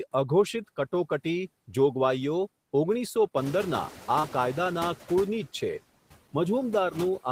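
It's a speech recording with noise suppressor artifacts running all the way through: the suppressor pulls the steady background down by about 16 dB, frame by frame and band by band, so the noise dips in the gaps and swells back under the talking. Right after "જોગવાઈયો ઓગણીસો", at 3.36 s, you get the noise suppressor catching up. The room noise jumps by roughly 15 dB somewhere around three and a half seconds in, and the suppressor's noise estimate is still tuned to the quieter floor, so at first it only takes off about 6 dB and the louder noise comes through fairly raw. It then takes about 1.61 s to adapt, and the noise sinks back down by 4.97 s. Once it settles, the room noise sits about 17 dB under the speech. In the middle of that stretch, from 4.19 to 4.25 s, there's a short concealed packet loss. About 40 ms of audio didn't reach the decoder in time, and the receiver covered roughly 37 ms of the gap by stretching the last bit of sound forward before blending back into the real signal. 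You hear it as a quick smear or wobble in the voice there.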